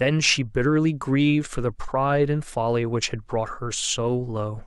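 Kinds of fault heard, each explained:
No technical faults can be heard in this recording.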